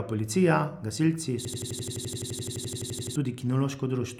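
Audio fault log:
1.45–3.16 s, system hang loop: Right after "policija gasilci", the speech locks into one 85.33 ms slice that repeats exactly, 20 times. The computer or driver stalled, but the sound hardware kept replaying the same ring buffer. The slice length fits a 4096-sample buffer. At 11.7 repeats per second, it comes across as a machine-gun stutter. About a second and a half of real audio is lost.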